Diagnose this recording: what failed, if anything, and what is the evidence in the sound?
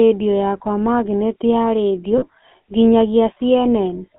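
The whole clip was run through the GSM full-rate codec, and the damage is plainly audible. There's a buzzy, gravelly roughness throughout, with the band squeezed to roughly 200 Hz to 3.5 kHz. The coder rebuilds speech from a vocal-tract filter fed by sparse, regular pulses, which fits a 13 kbps full-rate link.

The second problem is on the network or radio side: lost GSM frames from 2.18 to 2.25 s. For about 40 ms the sound freezes into a short, rough, metallic ring, which points to two dropped 20 ms frames. The decoder bridged the gap by replaying the last good frame's settings.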